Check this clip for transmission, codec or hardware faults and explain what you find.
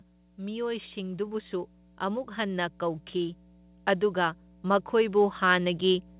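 Two faults are present: mains hum throughout the recording, and automatic gain rising twice.

Mains hum runs through the whole clip as a steady low tone at 60 Hz, sitting well below the speech. A ground loop or a nearby transformer is coupling the power line into the signal path. What separates it from low-frequency rumble or wind noise is its fixed pitch and constant level. It does not drift, and it does not follow the speech.

Automatic gain rising occurs from 0.36 to 3.43 s, where the level climbs by about 6 dB, and again from 4.0 s to the end. In both stretches the gain control judged the input too quiet and turned it up gradually. Speech and background swell together. This is what distinguishes it from a speaker simply getting louder. Because it is a slow ramp lasting seconds, it is also different from an abrupt level step or clipping.

The audio also carries nothing above 4 kHz. That fits the narrowband G.711 call codec it passed through.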